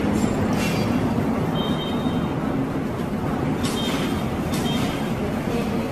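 Generation loss throughout: the sound is swirly, hollow and smeared, with blurred attacks and nothing above 14 kHz, likely from roughly ten AAC re-encodes, consistent with 64 kbit/s.

Doubled audio track from 3.26 s to the end: an equally loud, full-band copy trails about one second behind and starts abruptly, likely from a second, slower capture path.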